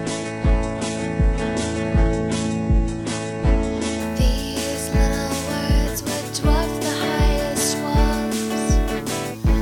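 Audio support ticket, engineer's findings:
Adaptive stream starting at a low bitrate, 0 to 4.0 s. Treble thin or synthetic, nothing above 11.1 kHz, stronger codec artefacts, which points to very-low-bitrate HE-AAC. Sudden gapless jump in quality at 4.0 s, when the player switched renditions after measuring bandwidth.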